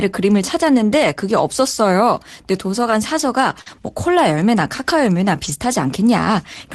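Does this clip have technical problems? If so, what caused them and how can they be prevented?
Yes, there are two kinds of packet-loss fault, heard through an Opus call path whose highest frequencies stop at about 12 kHz, which fits a bitrate around 24 kbps.

Lost packet rebuilt from error correction: at 1.03 to 1.05 s, 3.66 to 3.68 s and 5.44 to 5.50 s. The last spans 40 ms, which fits two lost packets. Each missing stretch was replaced by a low-bitrate backup copy carried in the following packet, so the sound doesn't break. Those spans turn briefly rougher and noisier. What separates this from concealment is that the actual sound continues with no smear or invented tail, just a drop in quality. Increasing the network's reliability or the Opus error-correction bitrate reduces how often this happens and improves the rebuilt frames.

Short concealed packet loss: from 3.61 to 3.68 s, about 40 ms of audio never arrived in time, and the decoder filled roughly 44 ms by extending the preceding sound before blending back into real audio. 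It is heard as a short smear or wobble rather than added roughness. That sets it apart from the rebuilt frames, because nothing of the real signal survives in the gap. The patch ends right where the rebuilt packet at 3.66 to 3.68 s finishes, so the two run together. A larger jitter buffer or a more stable connection lets late packets arrive before they are needed.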